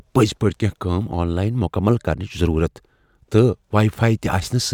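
No technical fault can be heard anywhere in this speech recording, and the signal stays continuous and stable throughout.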